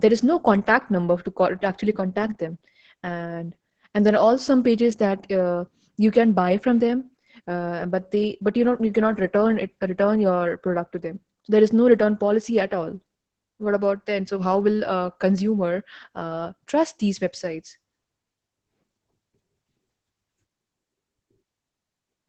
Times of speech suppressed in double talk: none

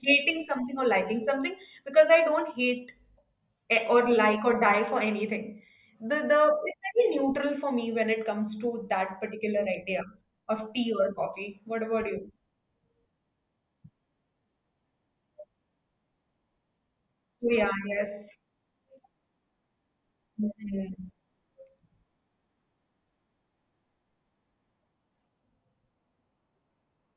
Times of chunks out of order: none

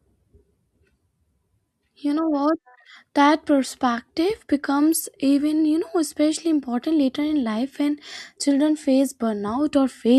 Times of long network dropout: none

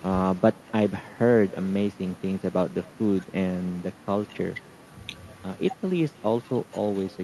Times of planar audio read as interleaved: none

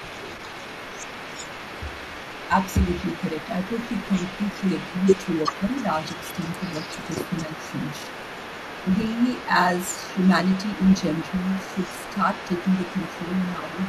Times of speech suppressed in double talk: 5.48-5.67, 7.47-7.65, 13.56-13.77

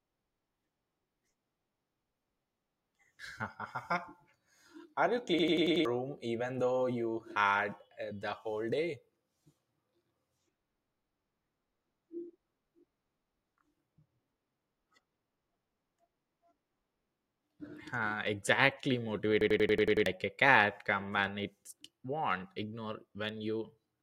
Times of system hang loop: 5.39-5.85, 19.41-20.06

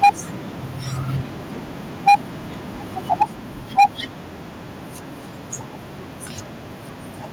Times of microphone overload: 0.03-0.10, 2.07-2.15, 3.12-3.23, 3.78-3.86

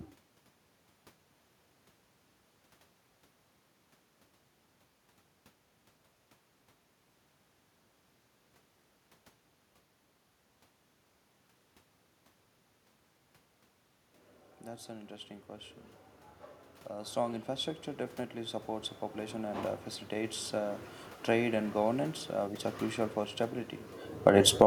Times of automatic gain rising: 16.91-17.77, 18.33-20.89

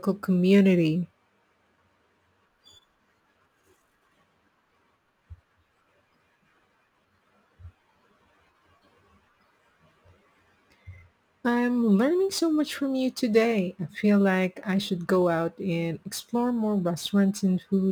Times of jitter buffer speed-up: none

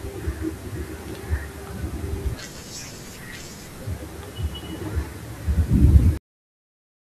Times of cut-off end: 6.17-7.05

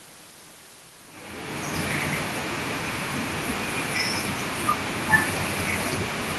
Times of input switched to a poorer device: none

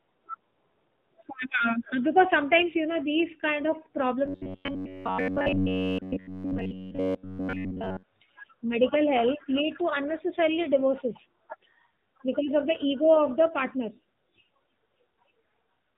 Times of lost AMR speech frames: 1.58-1.63

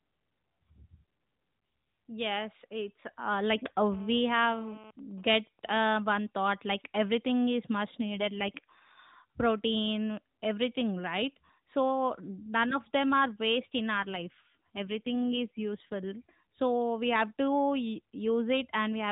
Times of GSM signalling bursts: 4.99-5.84

